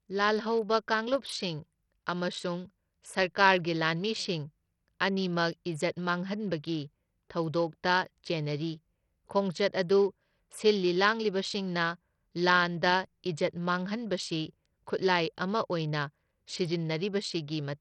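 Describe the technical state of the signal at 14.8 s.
At 14.8 s the speech is still passing through what is likely Bluetooth SBC compression, which runs through the whole clip at a starved bit allocation that fits about 64 kbps. The upper sub-bands get no bits, so nothing survives above 13.3 kHz, and coarse quantisation leaves heavy grit and aliasing on the sound.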